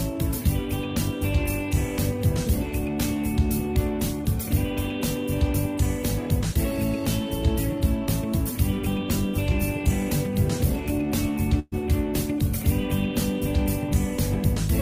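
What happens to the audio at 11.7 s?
A burst of packet loss runs from 11.59 to 11.75 s: about 120 ms of audio never arrived, so the receiver stretched the last sound for roughly 120 ms, fading it, then about 30 ms of silence before playback resumes further on. Unlike a plain dropout, the gap is masked by a held, decaying sound.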